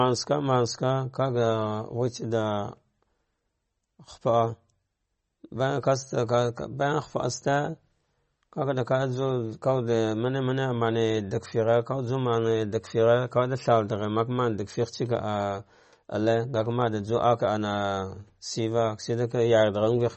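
Throughout the speech, nothing is heard above 8.3 kHz. The sound is watery and swirly, with plainly audible damage. Sibilants chirp metallically. This is likely MP3 compression at a low bitrate, near 35 kbps. Starved of bits, the encoder drops the treble and flickers weak frequency lines.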